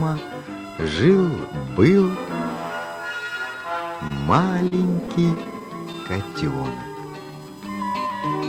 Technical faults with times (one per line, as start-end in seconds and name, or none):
0.00-8.48 USB whine
0.43-1.86 channel delay (comb filtering)
4.07-5.96 repeated stalls (stutter)
6.95-7.45 jitter buffer slow-down